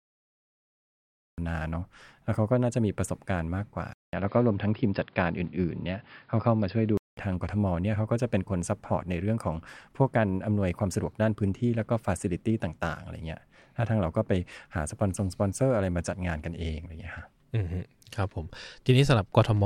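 The recording of this speech started late, so the clip opens with digital silence up to 1.38 s and then drops straight into a sound already under way. That is a cut-off start: with no natural attack or fade-in, the first audible moment arrives abruptly, as if mid-syllable. Later, the input was likely switched to a poorer device between 3.93 s and 7.17 s. The change begins with a gap of about 200 ms, after which the audio loses everything above 5.2 kHz and turns dull and boxy, with a new background noise sitting well below the speech. Loudness stays roughly the same, so the change is heard in the tone and the background noise rather than in the level. At 7.17 s the full bandwidth returns and the sound clears up again.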